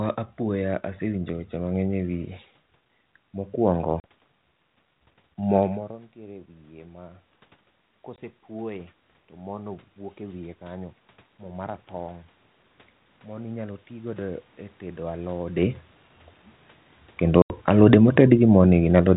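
At 4.0 s, packet loss on the ADPCM call cuts a hard 40 ms hole, about two packets. The decoder's predictor loses track, so the sound resumes slightly distorted. Another 20 ms gap follows at 8.16 s. From 6.13 to 7.25 s, after the input drops by about 22 dB, automatic gain rises by about 4 dB. Sound and room noise swell together. It rises again from 8.47 to 12.28 s. At 17.22 s, automatic gain falls by about 3 dB, sinking until 19.01 s. Within that fade, an 80 ms loss from 17.42 to 17.52 s leaves a longer hole.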